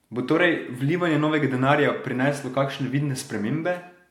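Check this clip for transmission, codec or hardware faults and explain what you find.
Nothing in the speech points to a transmission, codec or hardware problem; no faults found.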